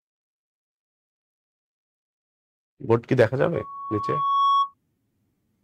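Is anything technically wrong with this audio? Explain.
Yes. From 3.54 to 4.74 s there's loudspeaker feedback squeal: a 1.1 kHz tone swells over about a second, ending up roughly 5 dB above the sound, as the mic re-amplifies its own speaker.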